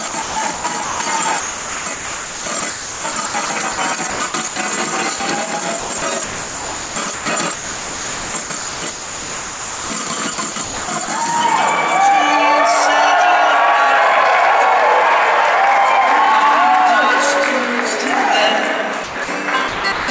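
Sound chopped by the voice detector occurs from 0.08 to 1.00 s, 1.40 to 3.78 s, 4.10 to 4.56 s, 5.80 to 7.26 s, 7.54 to 11.08 s, 19.04 to 19.28 s and 19.68 to 20.08 s. The cause is likely a sender-side detector toggling transmission on and off, so quieter stretches are swapped for comfort noise: 0.46 s, 1.56 s, 0.24 s, 1.0 s, 2.48 s, 0.16 s and 0.32 s respectively. The result is choppy.

Sound dropped by the voice detector appears at 5.16 to 5.20 s. For 40 ms, the detector likely treated faint sound as background and stopped sending, so a brief patch of steady comfort noise replaces it before the audio resumes. Throughout the clip, nothing is heard above 8 kHz, which fits a wideband call codec such as G.722.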